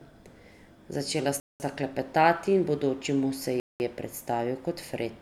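At 1.4 s, just before "sta klepetati in bodoči", and at 3.6 s, a gap between chunks inserts 200 ms of silence at each 2 s join: sharp-edged blank columns, flat waveform.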